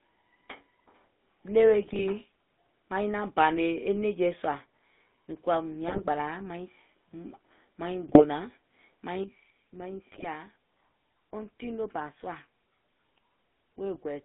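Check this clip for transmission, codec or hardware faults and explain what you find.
The whole clip has passed through the GSM full-rate codec, and four short bursts of GSM bit errors occur along the way.

GSM full-rate codec, throughout: the speech has the buzzy, gravelly texture of the first GSM codec, plainly audible. It rebuilds the voice from a vocal-tract filter driven by a sparse, regularly spaced pulse excitation, so fine detail between pulses is lost. The sound is confined to roughly 200 Hz to 3.5 kHz, which fits a 13 kbps full-rate channel.

GSM bit errors at 1.82–2.06 s, 5.88–6.05 s, 8.07–8.24 s and 10.12–10.29 s: each burst lasts under a quarter of a second and breaks the speech into squawks, pops and a gargling texture. Corrupted bits reaching the decoder distort the filter, pitch and gain parameters, so individual frames get a warped spectrum or sudden level jumps. The pattern points to an error rate of about 2 percent over roughly eight frames per burst.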